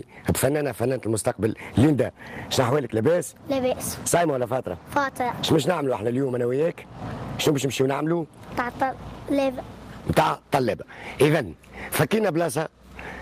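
No technical fault can be heard anywhere in this audio. Nothing in it calls for repair or further investigation.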